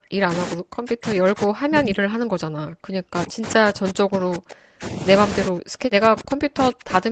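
A speech recording in which the echo canceller likely mistook double talk for echo and suppressed the talker, so the voice drops by roughly 40 dB from 0.0 to 0.31 s, 0.53 to 5.05 s and 5.48 s to the end.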